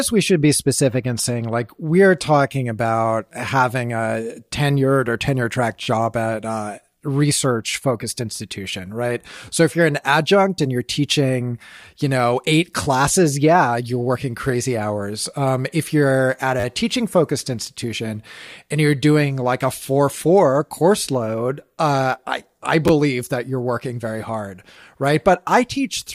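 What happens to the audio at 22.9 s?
Right around there, from 22.88 to 22.90 s, you get a repeated buffer. The next chunk of audio didn't show up in time, so the playback device just played its last block again, twice more, with a hard join each time. The repeats are so short (the spacing fits a buffer of roughly 10 ms) that the speech doesn't stutter. It comes across as a quick click or tiny buzz, and practically nothing is lost.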